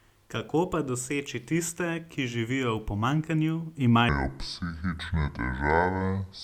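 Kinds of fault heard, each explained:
Section at the wrong speed: from about 4.09 s to the end, the speech drops to 0.64 times speed, sounding slow and roughly seven semitones deeper, likely from playback on the wrong clock.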